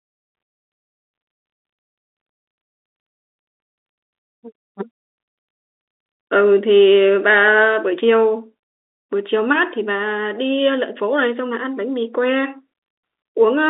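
Nothing goes wrong anywhere in this speech clip, which simply has the narrow sound of an ordinary phone line, with the band running from about 200 Hz up to 3.7 kHz and nothing above 3.8 kHz.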